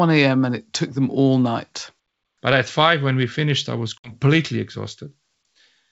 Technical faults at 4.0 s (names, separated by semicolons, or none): packet loss on an ADPCM call